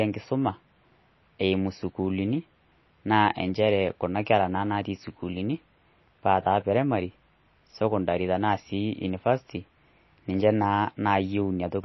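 Throughout the speech there is plainly audible damage of the kind MP3 compression leaves, likely from encoding at a low bitrate, around 24 kbps. With so few bits, the encoder discards the treble entirely, and nothing remains above about 5.8 kHz, so s sounds lose their edge and the audio sounds dull. Weak frequency components drop in and out from frame to frame, giving a watery, swirling texture, and consonant onsets sound smeared.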